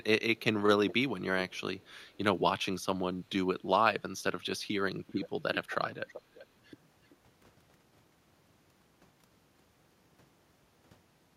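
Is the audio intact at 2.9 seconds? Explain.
Yes, at 2.9 seconds the speech plays through cleanly, with no dropout, click, distortion or other fault audible at that point.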